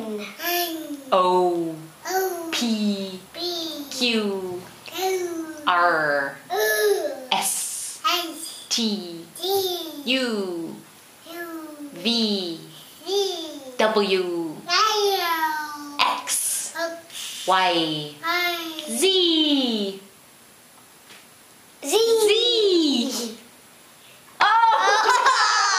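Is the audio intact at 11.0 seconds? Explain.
Yes, at 11.0 seconds the audio plays through intact, with no dropout, click, distortion or other fault to be heard at that point.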